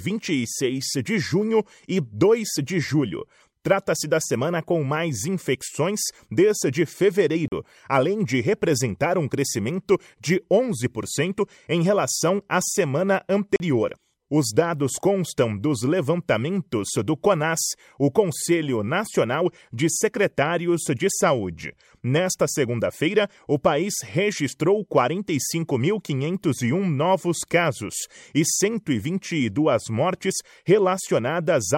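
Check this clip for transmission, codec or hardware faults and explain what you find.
Two short holes break up the speech, each a block of digital silence. At 7.48 s and again at 13.56 s the audio drops to silence for 40 ms, and the signal stops and restarts without any fade. The likely cause is an output buffer that wasn't filled in time, leaving a 40 ms gap.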